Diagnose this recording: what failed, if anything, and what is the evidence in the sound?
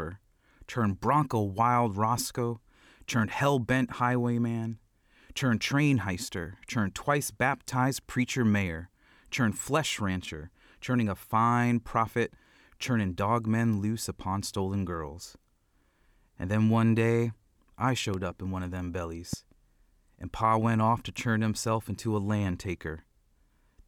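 Loud pops at 18.14 s, just after "then one day I", and 19.33 s, after "in one of them", jump well above the speech. They are likely voltage spikes in the analogue wiring.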